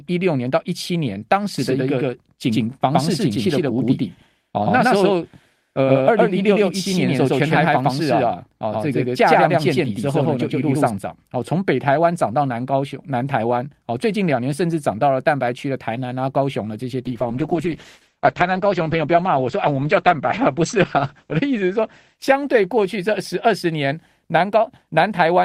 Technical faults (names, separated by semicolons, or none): doubled audio track; call bitrate drop